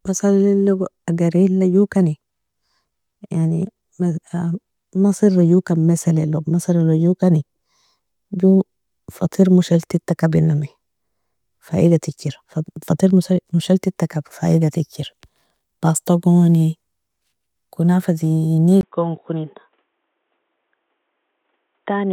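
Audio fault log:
18.81–22.12 s, input switched to a poorer device: after a 20 ms gap the speech turns dull and boxy with nothing above 3.8 kHz, drops roughly 5 dB and gains a faint new noise floor, likely from capture moving to a narrower-band microphone or headset profile.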